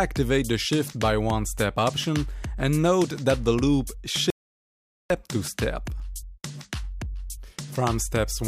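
The audio has an audio dropout to silence from 4.30 to 5.10 s, cutting out mid-flow for 0.8 s with no room tone, likely from a lost input link. On a waveform it's a flat line; on a spectrogram, a fully blank vertical band.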